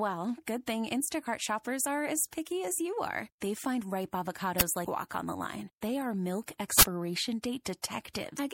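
Throughout the speech, a watery, swirly texture with dulled treble points to MP3 compression, likely at a bitrate around 64 kbps, with weak frequency content dropping in and out. At 4.6 s, an uninitialised buffer is audible as a loud crack from leftover memory played as samples. From 4.82 to 4.87 s, damaged data in the compressed stream makes the decoder lose frame sync, producing a brief glitch as it searches for the next frame. From 6.79 to 6.83 s, a second uninitialised-buffer burst, about 40 ms long, blasts harsh digital noise. From 8.35 to 8.39 s, another corrupted stretch gives a brief glitch as the decoder resynchronises.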